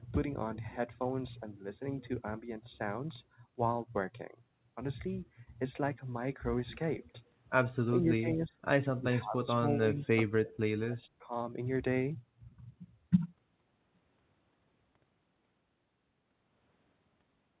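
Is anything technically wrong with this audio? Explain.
Yes. The speech is suppressed in double talk four times: 7.86 to 8.58 s, 8.84 to 9.64 s, 9.80 to 10.62 s, and 10.81 to 11.26 s. In the first three stretches the voice dips in pieces for roughly half a second, and in the last for about 0.3 s. The first drop is about 20 dB and the later ones reach about 30 dB. The likely cause is an echo canceller that mistook the talker for loudspeaker echo while the far side spoke, and pulled both down.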